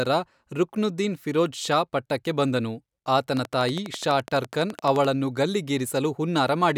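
From 3.37 s to 5.06 s, a train of clicks runs over the speech. The clicks arrive evenly, close to 12 per second, about twenty in all. Each has much the same sharp shape. They peak about 10 dB above the speech, so they stand out clearly. They keep ticking through the pauses too. The steady pulse points to likely interference from nearby equipment or a faulty connection or power supply.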